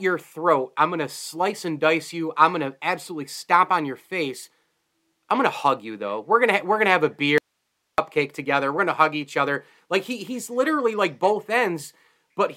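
At 7.38 s, right after "going to have a", the speech drops out to a faint residue of hiss for about 0.6 s, until 7.98 s, likely a brief signal loss with the path still live. The waveform collapses abruptly to a thin band roughly 55 dB down, and the spectrogram shows only faint broadband noise.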